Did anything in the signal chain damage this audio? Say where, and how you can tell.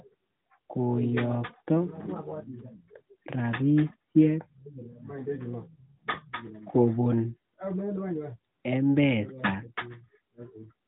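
No, nothing damaged this audio.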